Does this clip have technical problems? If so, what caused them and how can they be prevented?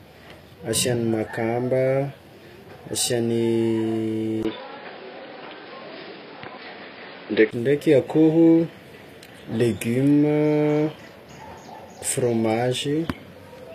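Yes. Throughout the clip, treble up to 14.9 kHz sounds rebuilt rather than captured, with plainly audible codec damage: harmonics don't line up above the crossover and s sounds turn gritty. That is likely HE-AAC spectral band replication at a rate that fits about 24 kbps, which tells it apart from simple low-pass dulling. Encode at a higher bitrate or with plain AAC to prevent it.

From 4.43 to 7.53 s the band stops at 5.3 kHz, a 20 ms silence marks the switch, new background noise sits roughly 30 dB below the signal and the level shifts by about 5 dB. This is likely an input switched to a poorer device; unlike codec damage, it begins and ends abruptly. Lock the recording input so the system cannot change devices mid-session.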